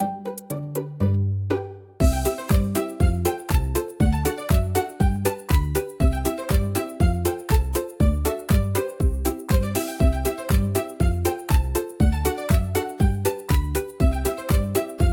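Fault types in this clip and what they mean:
clock drift buffer slips: Two devices likely run on separate clocks about 150 ppm apart, so the buffer between them periodically drops or repeats a handful of samples. The sound gets a regular click every 1.28 s, roughly ten of them from 1.32 to 14.11 s.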